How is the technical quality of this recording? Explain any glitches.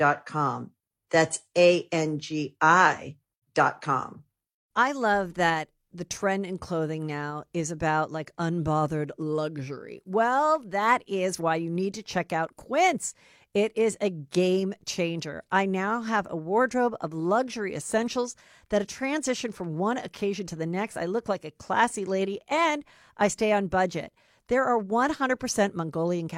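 No audible glitches or faults.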